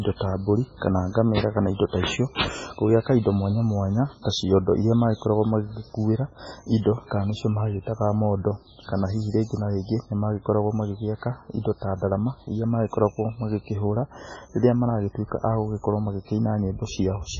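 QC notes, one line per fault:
Throughout: MP3 compression, likely at a very low bitrate near 16 kbps. Nothing survives above about 7.6 kHz, so the speech sounds dull and band-limited, and weak spectral lines dropping in and out between frames give it a watery, swirly texture with smeared consonant onsets.
2.35 to 2.41 s: pre-echo. A short hiss leads a sharp onset by about 56 ms. The codec spread the quantisation noise meant for the loud attack across its whole transform block, filling the quiet gap beforehand and softening the attack itself.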